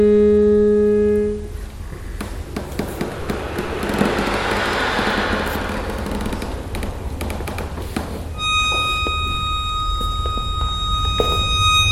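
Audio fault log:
Nothing stood out on listening.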